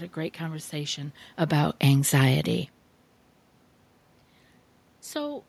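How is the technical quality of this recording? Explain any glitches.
There are no glitches to explain in the technical quality of this recording.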